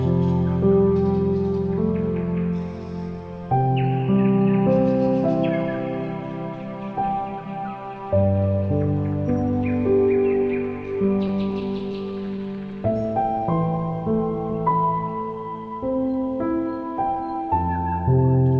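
From 11.28 to 13.06 s the sound picks up a string of tiny ticks and momentary smears, around ten of them, each only about 10 ms long. These are scattered short gaps: individual packets arrived too late or not at all, and the receiver covered each hole by stretching out the sound just before it. Together the patches add up to roughly a tenth of a second, so the flow holds together with only small hiccups.

Overlapping the end of that stretch, from 12.89 to 13.47 s, the audio drags noticeably while its pitch stays put, running at 92% speed. It happens again, more gently, from 13.91 to 14.71 s at 96% speed. This is jitter buffer slow-down. With its reserve running thin, the receiver rebuilt it by repeating single pitch periods and slices of pause many times over. That added about 54 ms in the first stretch and 36 ms in the second, which draws the sound out.

From 17.06 to 17.63 s the opposite happens. 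The sound hurries at 110% speed, again with unchanged pitch. This is jitter buffer speed-up: the buffer held more audio than it needed, so the receiver cut short pieces of one or a few pitch periods in quick succession. Around 70 ms disappeared, giving a clipped, rushed feel. Throughout, the G.722 call path leaves nothing above 8 kHz.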